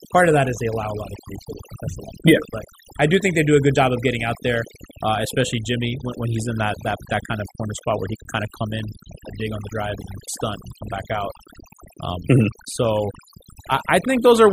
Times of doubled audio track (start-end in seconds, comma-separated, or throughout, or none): none